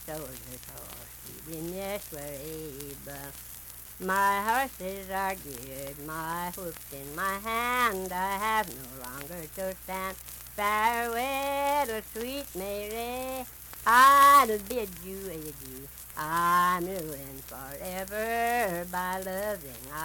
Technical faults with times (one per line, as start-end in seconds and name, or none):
none